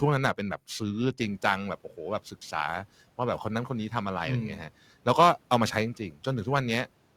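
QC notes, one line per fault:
Throughout: periodic clock jitter. The converter clock is being shaken at a steady rate of around 2 kHz, so each component of the speech picks up sidebands spaced about 2 kHz above and below it, strongest on the higher-frequency content such as sibilants and upper harmonics. The result is a rough, metallic edge that rides on the speech and disappears in the pauses, which separates it from the room noise that comes up by about 18 dB near 1 s and sits about 26 dB under the speech.
5.97 to 6.19 s: speech cut by the noise suppressor. Within this window the suppressor treated part of the speech as background and pulled it down along with the noise, by about 11 dB at the deepest point. In total about a tenth of a second is affected, enough that the low-level parts in this stretch, such as soft consonants or a word ending, come across as swallowed or faint.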